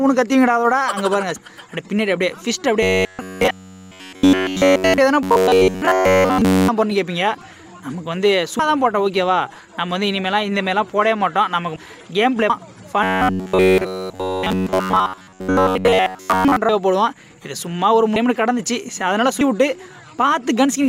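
Compressed frames skipped at 1.36 s: whole 32 ms frames never play, so the sound jumps ahead about 0.7 s. Robotic sound from repeated short buffers from 2.83 to 4.98 s: a rigid metallic buzz at 93.8 Hz, likely because a roughly 10.7 ms chunk is replayed while new audio fails to arrive. Inside it, at 3.50 s, frames are skipped again, jumping about half a second. The same buzz returns from 5.23 to 6.68 s. Frame skips then hit at 8.59 s (about 0.3 s lost), 11.76 s (about 0.5 s) and 12.50 s (about 0.4 s). The buzz covers 13.03 to 16.56 s. The last skips are at 16.69 s, the largest at about 1 s, then at 18.16 s (about 0.2 s) and 19.41 s (about 0.15 s).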